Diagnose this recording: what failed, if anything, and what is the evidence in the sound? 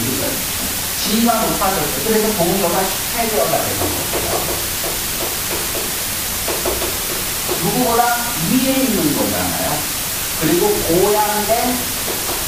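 The sample-format conversion failed: the audio was requantised to a low bit depth with dither, leaving about 3 bits. Dither was added before rounding, so the quantisation error is spread out as broadband white noise instead of distortion tied to the signal. From start to finish the sound sits under a constant, even hiss that is roughly as loud as the sound itself. The hiss never pumps, gates or crackles, which is what points to dithered requantisation.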